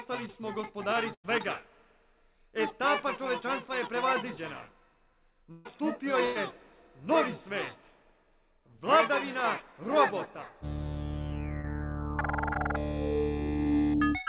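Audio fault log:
1.14–1.26 s, 5.52–5.67 s and 6.25–6.37 s, burst of packet loss: several consecutive packets went missing, about 100 ms, 140 ms and 100 ms of audio. Each time the receiver extended the last sound for roughly the same span and faded it down. What you hear is a held, dulling buzz or a fading hiss where the sound should have moved on, and then the audio resumes further along with that stretch skipped.
11.61–11.65 s and 12.53–12.57 s, short concealed packet loss: about 20 ms of audio failed to reach the decoder in time on each occasion. The receiver filled the hole with a brief continuation of the preceding sound, resynthesised from its pitch or as shaped noise, then blended back into the real signal. The result is a momentary smear or wobble, and a very short sound can drop out entirely. Both are heard through the call's G.711 mu-law coding, with nothing above 4 kHz.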